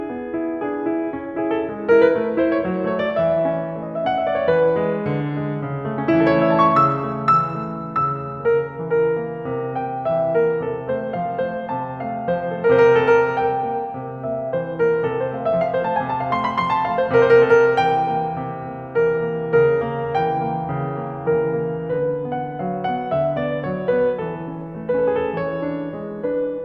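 No faults detected in this music recording; nothing to flag.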